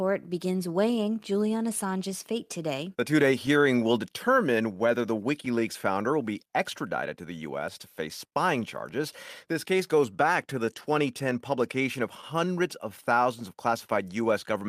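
Clock drift between sender and receiver runs through the whole speech clip. The sender's clock is about 4 percent slow, so the receiver keeps running short of audio.

From 0.21 to 7.60 s come repeated timing corrections. Short pieces are repeated to fill the gap. That plays at 97 percent speed, adding roughly 0.3 s.

A short stall from a late packet falls at 8.27 to 8.35 s. The buffer ran empty. The last sound is held for 51 ms, and nothing is lost.

From 9.53 s to the end, repeated timing corrections return at 97 percent speed. They add roughly 0.2 s.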